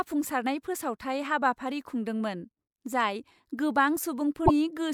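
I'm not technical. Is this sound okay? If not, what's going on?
No. From about 4.43 to 4.51 seconds the speech breaks into a brief chirp or squawk, caused by damaged data in a compressed stream. Part of the file was corrupted, so the player misread it. A plain dropout would go silent instead of chirping.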